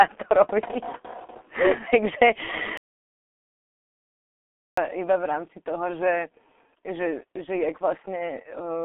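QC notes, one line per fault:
Throughout: G.723.1 codec. The speech is muffled and hoarse, with smeared consonants. It sits in a telephone-style band from about 250 Hz to 3.5 kHz, with nothing above 3.5 kHz. The heavy coarseness fits a codec running at roughly 6 kbit/s, coding 30 ms frames and updating its voice model slowly. On a spectrogram, energy stops at a hard ceiling near 3.5 kHz and the low bass is missing. Harmonics look blocky from frame to frame.
2.77–4.77 s: playback stall. The speech cuts off in mid-flow and the output is silent for 2 s before resuming. The likely cause is the player running short of data or its thread being blocked, so nothing reached the output until it recovered. The waveform shows a flat, silent stretch for the full two seconds, with abrupt edges at both ends. On a spectrogram this appears as a completely blank vertical band across all frequencies.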